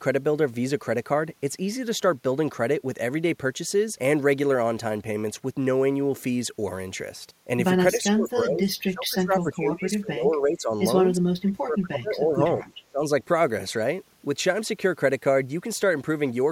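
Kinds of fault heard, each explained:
Speech suppressed in double talk: at 7.96 to 10.76 s, 11.18 to 12.71 s and briefly at 12.87 to 13.01 s, the speech sinks sharply, at its deepest by about 25 to 30 dB, and breaks up for roughly three seconds, then a second and a half, then a short flicker. The likely cause is an echo canceller that could not tell this talker from loudspeaker echo while both sides spoke, and so pulled everything down.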